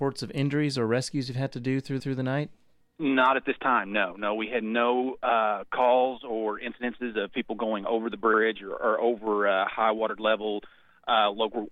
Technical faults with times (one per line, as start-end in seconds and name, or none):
2.00-2.16 repeated frames
8.33-8.40 repeated frames